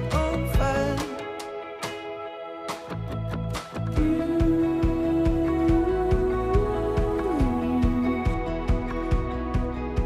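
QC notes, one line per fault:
No faults found on listening. Nothing in the audio calls for a QC entry.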